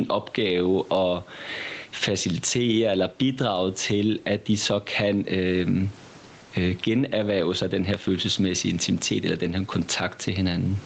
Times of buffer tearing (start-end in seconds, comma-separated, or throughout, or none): none